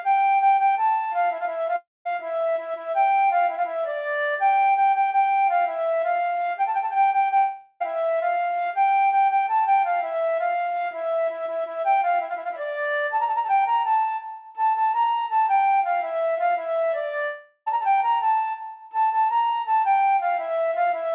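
At 1.76 to 2.07 s, 7.37 to 7.82 s and 17.24 to 17.68 s, the sound smears into a fading buzz, then drops to near silence in the first gap, and resumes with roughly 0.3 to 0.44 s missing each time. These are likely long network dropouts, with the receiver concealing the loss. The audio throughout stops at 4 kHz, which points to a G.711 call codec.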